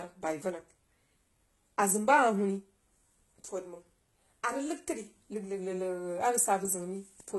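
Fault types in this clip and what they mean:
HE-AAC compression: The speech was likely squeezed through HE-AAC at a very low bitrate, around 16 kbps, with treble rebuilt from copied lower bands. Heavy damage throughout: sibilants sound gritty and metallic, and nothing reaches above 11.8 kHz.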